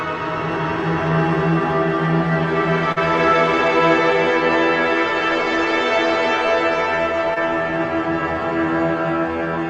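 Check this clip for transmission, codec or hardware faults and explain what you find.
Two short concealed packet losses: at 2.92 to 2.98 s about 40 ms never arrived, and at 7.34 to 7.38 s about 20 ms. The receiver extrapolated the preceding sound across each gap and blended it back, leaving a brief smear or wobble.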